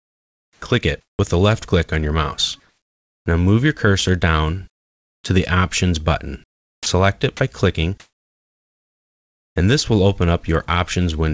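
Sound chopped by the voice detector runs from 0.00 to 1.19 s. Through this opening stretch the sender's voice detector likely toggled between transmitting and muting several times, so that about 0.8 s of the real signal was swapped for synthetic fill. Quiet parts and edges drop out and the audio sounds choppy.

Comfort noise in place of the background first appears from 2.60 to 3.26 s. With nothing detected as active sound, transmission likely paused, and the receiver generated noise roughly matched to the background's overall shape rather than its detail. The background, sitting about 60 dB below the loudest material, turns into a steady, featureless hiss, here only about 1 dB louder than the real background, so the change is in texture more than level. The same substitution returns from 6.44 to 6.86 s, where the fill is about 9 dB quieter and the background seems to sink away, and again from 8.00 to 9.56 s, a longer 1.56 s gap where the synthetic noise is about 13 dB louder than the real background and stands out as a sudden wash of flat noise.

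Onset clipped by the voice detector follows each of those gaps, at 3.23 to 3.26 s, 6.77 to 6.86 s and 9.53 to 9.56 s. The detector likely reacted late to the returning sound, so its first 30 ms, 90 ms and 30 ms were never sent and comfort noise covered them. Each re-entry starts abruptly, missing its soft attack, and at 6.77 s the longer cut shaves off more of the beginning. Throughout, the G.722 call path leaves nothing above 8 kHz.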